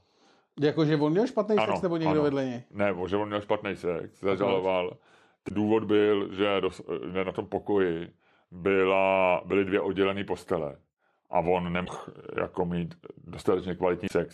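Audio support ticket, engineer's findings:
Damaged data in a compressed stream: short disruptions in the speech at 5.46–5.51 s, 11.85–11.89 s and 14.05–14.12 s, each about 40–65 ms. Probable component: decoder input. Corrupt bytes make frames misdecode until it resyncs on the next valid header.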